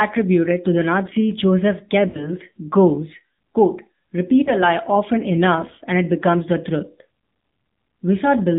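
Speech squeezed through the AMR narrowband mobile codec: nothing above 4 kHz, and a buzzy, synthetic edge that fits a low mode around 7.4 kbps. There are also lost AMR speech frames. From 2.08 to 2.31 s, just before "goes quote repeat", the decoder stretches the last good sound for about 60 ms and fades it out. Around 4.44 to 4.51 s, between "goes quote repeat" and "lie often enough and", there's a shorter 20 ms dip, which sounds like a single dropped frame.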